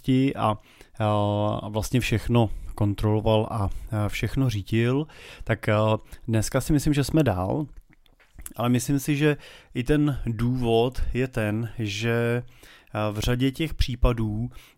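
At about 13.24 to 13.26 s there's a single loud pop, a sharp click that jumps out well above the speech, roughly 10 dB hotter, while the talking carries straight on underneath. It's likely a voltage spike, a plug, switch or static discharge, getting into the signal path.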